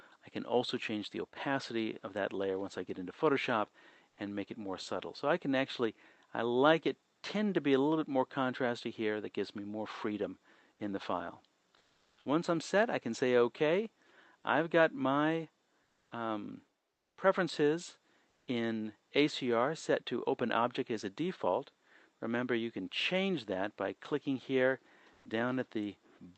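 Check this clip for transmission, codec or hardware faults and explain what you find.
Comfort noise in place of the background occurs six times: 4.09–4.17 s, 11.77–12.25 s, 15.83–16.11 s, 16.93–17.17 s, 18.29–18.47 s and 25.13–25.25 s. The sender likely paused transmission in quiet stretches (Opus discontinuous transmission), and the receiver filled the gaps with synthetic noise. It sounds like a smoother, featureless noise of a different tone, ranging from about 10 dB quieter to 2 dB louder. A spectrogram shows a smooth, textureless block, and the waveform shows an even envelope. The call path's 8 kHz band limit is visible as a spectrogram ceiling.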